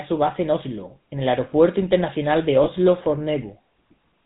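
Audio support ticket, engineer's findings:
GSM full-rate codec, whole clip: buzzy, gravelly roughness on all speech, plainly audible, nothing above 4 kHz. Points to 13 kbps GSM full-rate coding, where a vocal-tract model is driven by a sparse, regular pulse excitation. Tells it apart from plain band-limiting or a low-bitrate MP3: the grain follows pitch pulses, not swirly high-frequency artefacts.

Lost GSM frames, 2.64–2.68 s: brief rough, metallic ring where speech should continue. Fits a single dropped 20 ms frame, concealed by repeating the last good frame's parameters. Unlike a packet-loss gap or click, there is no silence or hard edge. The sound smears on briefly, too short to fade out.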